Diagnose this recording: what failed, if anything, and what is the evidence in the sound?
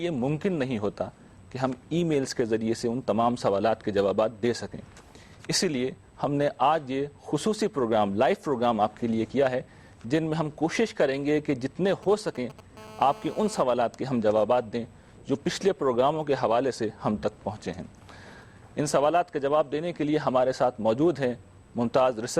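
GSM signalling bursts in the analogue stage: from 11.88 to 12.61 s, galloping ticks and short 217 Hz buzzes, roughly 20 dB below the signal, from rectified radio pulses.

GSM phone buzz, also analogue: from 12.77 to 13.62 s, a steady raspy 217 Hz buzz with many harmonics, about 19 dB below the signal, from a nearby phone's call bursts.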